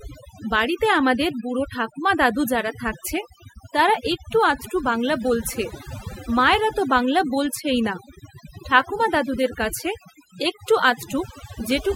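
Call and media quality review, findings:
Throughout: background near-silent with twinkling specks. Overdone noise removal: suppressor set too aggressive, gating bands near noise estimate, stripping quiet speech detail.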